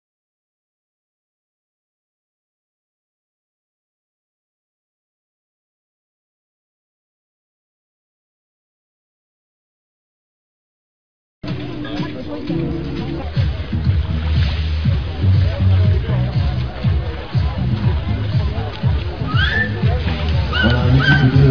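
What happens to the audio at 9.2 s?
Nothing goes wrong at 9.2 s; the audio plays through that point intact, with no dropout, click, distortion or other fault.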